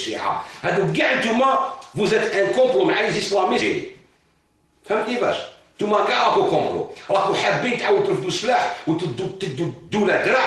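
From 5.49 to 5.93 s and again from 7.92 to 9.69 s there is a jitter buffer speed-up. The receiver drains excess buffered audio by cutting pitch-period slices, about 50 ms, then about a tenth of a second. The sound runs 10% and then 4% faster, at unchanged pitch, sounding hurried in the first stretch.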